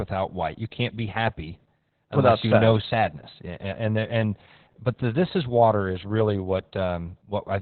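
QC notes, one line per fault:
Throughout, Opus voice compression: the speech stops sharply at 4.2 kHz and sounds muffled, hoarse and faintly robotic. This heavy damage points to the SILK coder in narrowband mode at a very low bitrate, which fits 8 kbps, with the vocal excitation coded only coarsely.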